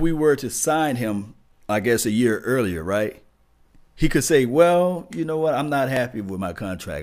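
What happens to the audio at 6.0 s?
At 5.97 s, just after "know what I'm not", the speech skips a few milliseconds. This is likely audio missing between chunks, lost where 2-second blocks join.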